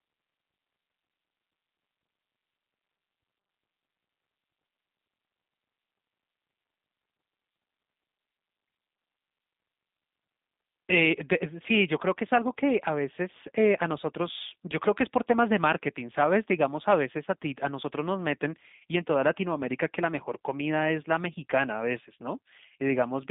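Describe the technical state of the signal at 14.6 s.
At 14.6 s the speech carries G.729 codec damage, present across the whole clip. Speech is rebuilt from a filter model and sparse pulses, which fits an 8 kbit/s stream, so it sounds rough and synthetic, confined to about 150 Hz to 3.7 kHz, with nothing above 3.8 kHz.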